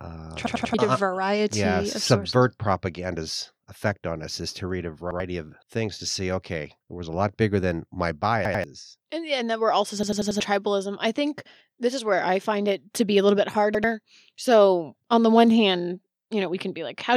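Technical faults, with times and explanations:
0.46–0.74 s, 5.11–5.20 s, 8.45–8.64 s, 10.03–10.40 s, 13.75–13.84 s: repeated buffer. Late audio made a 93 ms chunk (fits a 4096-sample buffer) replay one to four extra times, giving a stutter. The waveform shows identical blocks with abrupt joins, and the spectrogram shows repeating patterns with vertical edges.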